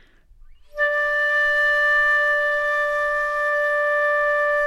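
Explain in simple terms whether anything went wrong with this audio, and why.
Nothing went wrong here.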